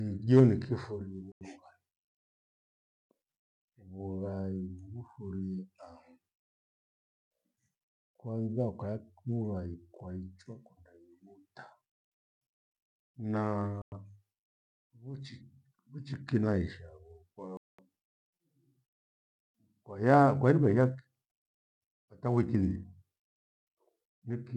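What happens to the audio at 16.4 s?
Nothing goes wrong at 16.4 s: the speech runs on through that moment with no dropout, click, glitch or other audible fault.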